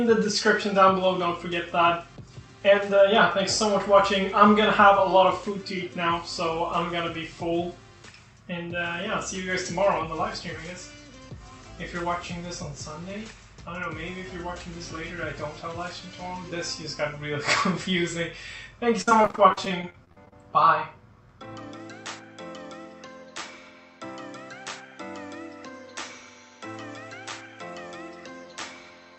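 Between 19.01 and 20.33 s the audio turns choppy and robotic from repeated packet loss (robotic sound): a rapid string of short holes, the longest 58 ms, each patched by stretching the previous sound, so about a third of that stretch is filled-in rather than real. A single dropout would leave one gap, not this steady chatter. The sound also stops near 8 kHz, which fits an Opus call path.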